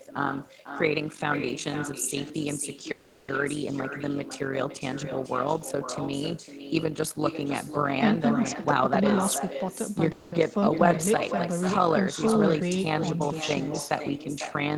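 A rough, robotic flutter at around 50 Hz, swinging by about 11 dB, runs throughout. This is overlap-add ripple: frames were rejoined with overlaps that don't sum to constant gain.

Every phrase is also shadowed by a thinner copy about 10 dB down and roughly half a second late. This is echo with no canceller, where the far-end loudspeaker's output returns uncancelled.

From 2.91 to 3.40 s the last sound is held and fades for about 370 ms, then resumes without loss. The same happens for 200 ms from 10.12 to 10.35 s. Both are call audio freezes, likely from delayed packets emptying the jitter buffer.

From 8.54 to 9.90 s the sound hurries at 118% speed with pitch unchanged. This is jitter buffer speed-up: about a third of a second was trimmed in pitch-period slices to cut delay.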